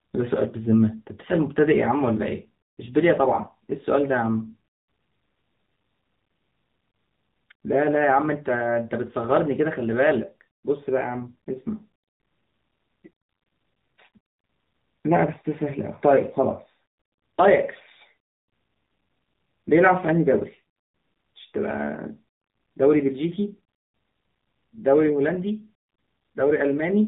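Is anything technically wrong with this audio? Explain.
Yes, there are two faults. Throughout, the speech went through the AMR narrowband mobile codec at a low bitrate, which fits the 7.4 kbps mode. Nothing above 4 kHz survives, and the voice sounds plainly buzzy and synthetic. At 6.92 s and 26.18 s, single lost AMR speech frames of 20 ms each made the decoder patch the gap from earlier settings, causing a brief dip or warble.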